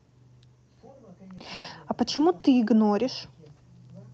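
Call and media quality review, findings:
Call audio freeze, 1.54–1.70 s: speech halts, last sound held as a fading buzz, then resumes where it stopped, with roughly 100 ms of delay added and nothing lost. Likely jitter buffer underrun from delayed packets. Spectrogram: smeared horizontal band; waveform: decaying repeated cycle.

Short stall from a late packet, 2.16–2.20 s: sound held about 20 ms too long with a slight buzz. Jitter buffer underrun, filled by stretching, resumed in place. Spectrogram: brief frozen frame.

Short stall from a late packet, 2.40–2.46 s: about 40 ms hold, faint dip. Same mechanism. Waveform: repeated periods, slight envelope sag. Opus energy stops at 8 kHz throughout.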